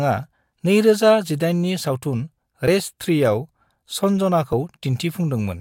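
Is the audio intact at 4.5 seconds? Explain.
No. At 4.53 s, compressed frames are skipped: roughly 10 ms of speech, a few frames' worth, never plays. The audio jumps ahead by that length, so the speech cuts straight from just before the gap to just after it.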